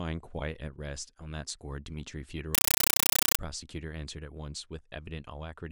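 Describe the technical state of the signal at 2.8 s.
At 2.8 s you're in a compressed stream played as audio, from 2.55 to 3.39 s: an undecoded AC-3 stream, likely around 384 kbps, landing as loud 8 ms static bursts 31 times a second.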